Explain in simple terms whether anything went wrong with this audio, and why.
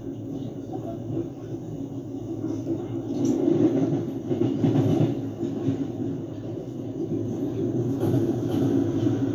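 From 7.26 seconds to the end, a doubled audio track appears: a second copy of the sound, a bit quieter, trails about half a second behind. Unlike a natural echo, it never fades or sounds roomy, and it starts abruptly, likely from an editing slip.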